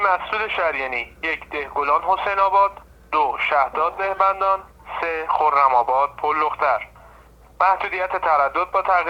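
No technical faults can be heard at any point in the audio.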